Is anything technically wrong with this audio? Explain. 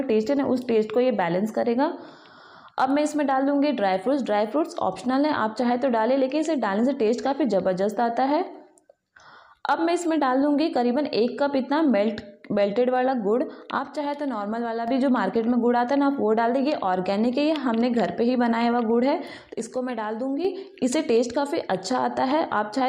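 Yes. One channel drops out twice, from 13.79 to 14.88 s and from 19.54 to 20.45 s. The level falls abruptly by about 6 dB and recovers, likely because one stereo channel went silent, halving what both channels shared once the two are summed to mono.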